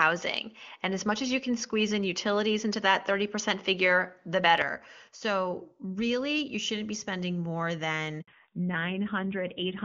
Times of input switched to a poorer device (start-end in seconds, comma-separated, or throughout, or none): 0.00-4.62